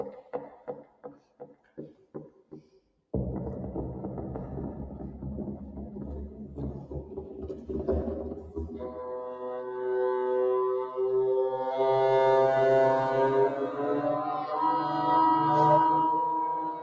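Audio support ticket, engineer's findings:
Noise suppressor applied to music or sounds, whole clip: level pumps and thins, swinging around 10 dB. A speech-tuned suppressor treats steady tones and ambience as noise while attacks pass. The swings follow the content, unlike a compressor's regular release. The call microphone processing's 8 kHz band limit is separate.

Sound cut by the noise suppressor at 0.21–3.11 s (about 16 dB, most of it affected), 6.29–6.58 s (about 6 dB), 6.78–7.7 s (about 10 dB), 8.35–8.57 s (about 8 dB), 14.24–14.57 s (about 9 dB), and 16.19 s to the end (about 15 dB). Held and decaying sound sinks while onsets stay intact. A dropout would take out the onsets as well.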